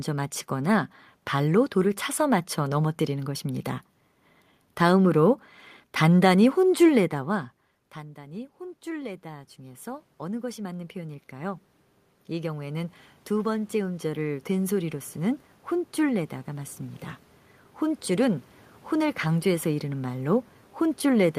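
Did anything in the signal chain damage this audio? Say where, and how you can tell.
Yes. The call-processing stage applied automatic gain rising from 7.10 s to the end. Around 7.5 s the talker moved away, and the input dropped by about 18 dB. The gain control treated this as a quiet input and slowly raised its gain. You can tell because the room noise swells along with the voice. On a waveform, the envelope and the noise floor climb together. On a spectrogram, the background band brightens across all frequencies.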